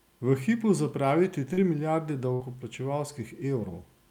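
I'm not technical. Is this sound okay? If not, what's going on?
No, there are two small glitches. From 1.53 to 1.59 s there's a short concealed packet loss: about 40 ms of the call arrived too late, so the receiver patched the hole by stretching the sound just before it. You hear a quick smear or wobble.

Then, from 2.33 to 2.42 s, there's a burst of packet loss: several pieces of audio in a row went missing, about 60 ms in all. The receiver held the last sound and let it fade, so you get a brief buzz or hiss, then a jump ahead.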